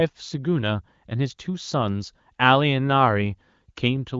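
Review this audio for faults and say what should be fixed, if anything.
No faults; nothing needs fixing.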